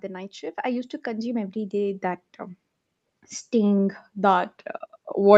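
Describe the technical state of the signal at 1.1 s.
At 1.1 s the signal is in the middle of an automatic gain rise. It runs from 0.05 s to 2.31 s. The gain control judged the input too quiet and kept turning it up. The total rise is about 8 dB. At this moment the speech and the room noise behind it are both still swelling together, and the level has not yet settled. Above the speech, nothing reaches past 8 kHz. That is the usual band limit of a call path.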